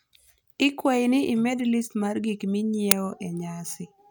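Speech clip with one fault: at 2.91 s a very short, loud crack cuts in, lasting about 5.8 ms. This is an uninitialised buffer, a block played out before any audio was written to it, so stale memory contents came through as samples. The length fits a 256-sample buffer.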